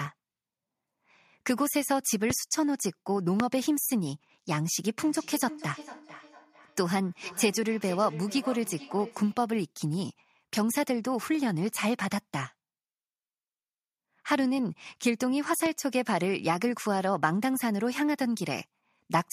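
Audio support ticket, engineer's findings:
Loud pops at 2.30–2.33 s, 3.40–3.43 s and 15.66–15.69 s: single sharp clicks roughly 15 to 20 dB over the speech, likely a plug, switch or static discharge spiking the line.

Feedback echo between two devices, 4.99–9.42 s: speech returns about every 400 ms, peaking around 16 dB below the speech. Another device in the room is re-feeding the call, which the local canceller can't catch.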